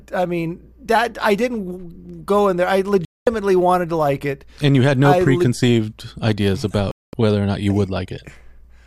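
At 3.05 to 3.27 s, after "go in there I", and again at 6.91 to 7.14 s, before "whether or not you", a digital broadcast dropout mutes the speech for about 0.22 s. Frames failed and the receiver went silent, consistent with roughly nine lost frames. Unlike a concealed glitch, nothing is repeated or smeared, and the missing speech never returns.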